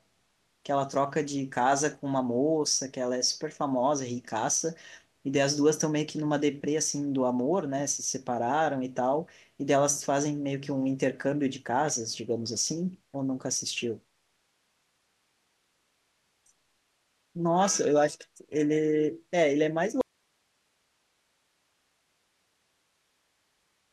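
At 20.01 s the speech cuts off abruptly and does not return; from there to the end only a low hiss remains, around 45 dB below the signal. This is an audio dropout to a faint residue, likely a lost signal feed while the downstream path stayed live.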